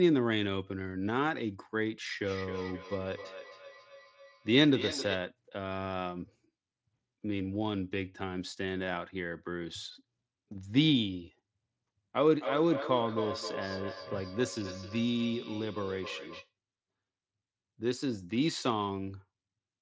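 From 2.24 to 5.29 s and 12.4 to 16.53 s, feedback echo between two devices repeats the speech roughly every third of a second, peaking about 10 dB, then about 8 dB, below it. One device's playback re-enters another's microphone uncancelled. Spectrograms show evenly spaced ghost copies of each syllable.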